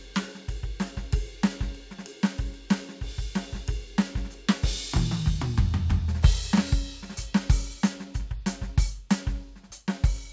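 No faults: the music runs without interruption and without any audible technical defect.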